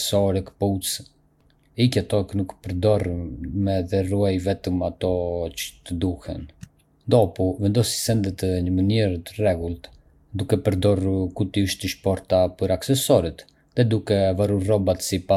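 No faults to report anywhere in the speech recording; nothing in the audio warrants a timestamp.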